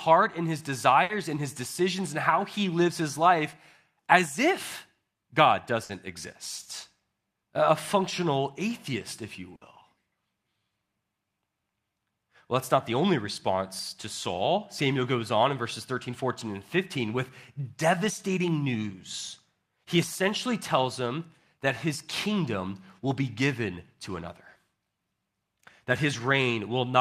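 At 1.03, 5.83 and 9.55 s the speech briefly smears into a held, fading tail, then jumps ahead. Each is a burst of packet loss: about 60 ms went missing, and the receiver stretched the preceding sound to fill it while turning it down.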